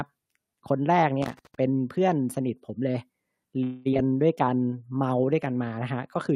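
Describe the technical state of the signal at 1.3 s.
At 1.3 s the signal is in the middle of a burst of loose connector crackle. It runs from 1.22 to 1.55 s, about a third of a second. A worn or dirty contact is making and breaking as it shifts. That chops the speech into fragments, and any DC on the line turns each break into a pop. The result is an irregular, scratchy crackle laid over the audio.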